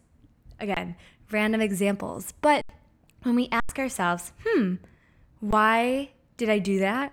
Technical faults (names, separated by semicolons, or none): underrun with held sample